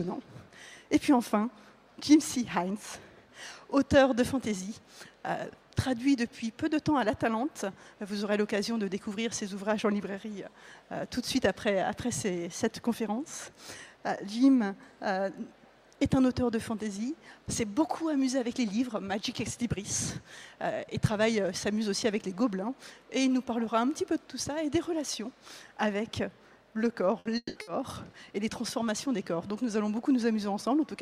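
All the trouble sits in one short cluster near the end of the clip, around 27.2 to 27.7 s, where the audio stream is repeatedly interrupted. First there's a burst of packet loss at 27.19 to 27.28 s. The receiver covers the hole by carrying on the last bit of sound for about 60 ms and fading it out, so you hear a brief held buzz or hiss. When things pick up again, roughly 60 ms of the original has simply been skipped. The same thing happens again at 27.61 to 27.70 s, with the same 60 ms of stand-in and 60 ms gone.

Between those two, from 27.37 to 27.58 s, there's a longer gap that sounds like a long network dropout, which is likely the cause. The concealment stretches the last sound for about 180 ms as a decaying buzz or hiss, then gives up, leaving about 30 ms of silence before the audio returns. About 180 ms of material is missing across that jump.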